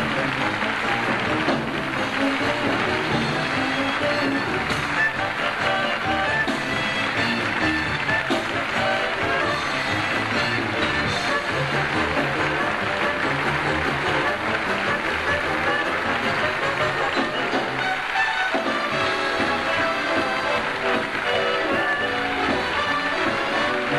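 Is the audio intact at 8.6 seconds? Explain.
Yes, at 8.6 seconds the audio plays through cleanly, with no dropout, click, distortion or other fault audible at that point.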